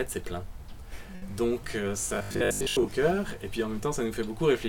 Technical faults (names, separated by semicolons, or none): short stall from a late packet; robotic sound from repeated short buffers